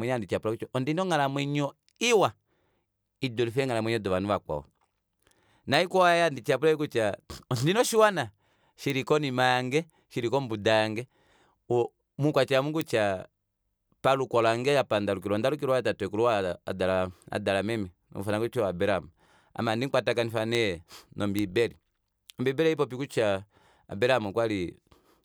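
A flipped bit in memory or on a digital link pushes a single sample, or at 20.55 s three adjacent samples, away by a power of two before it snaps back. Each bit error spike is a sharp broadband tick unrelated to the speech: at 5.74 s, at 8.90 s between "kutya ondina oshiwana" and "konima yange shili kombuda", at 12.81 s, at 20.55 s after "abraham ame handi mukwatakanifa", and at 21.39 s, peaking around -14 dBFS, or about -8 dBFS at 12.81 and 21.39 s.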